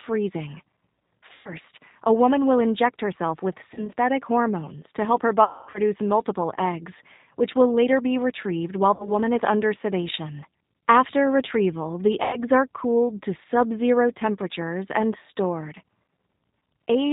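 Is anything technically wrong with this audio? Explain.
Yes. G.729 codec damage runs throughout. The encoder rebuilds speech from a vocal-tract filter and sparse pulses at 8 kbit/s, leaving a band-limited, rough, slightly synthetic voice.

VoIP packet loss concealed by the speech codec occurs at 1.33–1.54 s, 3.74–3.89 s, 5.44–5.80 s, 8.94–9.12 s and 12.24–12.41 s. The decoder extrapolates its last pitch and filter and fades the gain, so each gap is stretched into a fading tone or noise and the voice recovers weakly afterward. The 5.44 s gap is longest, with about 240 ms missing in one run.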